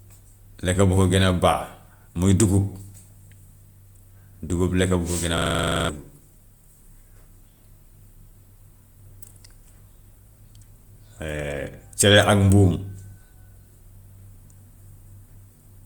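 From 5.38 to 5.89 s the speech gives way to a rapid, mechanical stutter at about 23.4 Hz, the same 42.7 ms fragment repeating exactly 12 times before normal audio returns. This is a system hang loop. The computer or driver stalled while the audio hardware kept replaying its ring buffer, whose length fits a 2048-sample buffer. Roughly half a second of the real audio is lost behind the repetition.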